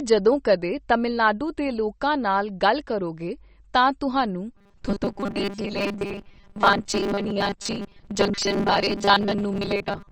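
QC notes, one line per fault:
Throughout: MP3 compression. Codec damage is plainly audible across the whole clip, with weaker spectral detail flickering in and out from frame to frame so the speech takes on a watery, swirly texture, and consonant attacks lose their crispness. That pattern is what you get when an encoder runs short of bits and starts dropping the quieter frequency lines, and the amount of damage points to a low bitrate, likely somewhere around 33 kbps.
4.56 to 10.11 s: robotic sound from repeated short buffers. From this point to the end, the speech turns into a rigid metallic buzz at 200 Hz that only loosely tracks the original. Short chunks are being replayed while fresh audio is skipped, with roughly two thirds or more of this stretch made of repeats. A 200 Hz buzz fits a 5 ms chunk looping, likely because new data was arriving too slowly.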